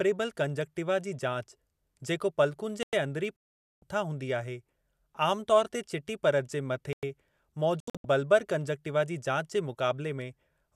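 At 2.83 s, a 100 ms gap between chunks opens. Chunked delivery left silence at the join. It recurs at 6.93 s, after "परत जे", fitting 4 s chunks. From 3.38 to 3.82 s, a digital broadcast dropout mutes the signal as frames fail. Sound returns at "हूंदी आहे". Another dropout at 7.80 to 8.05 s breaks into short holes, the longest 72 ms.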